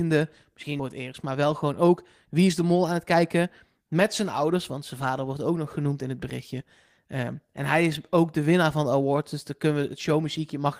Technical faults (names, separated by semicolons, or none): skip ahead; jitter buffer speed-up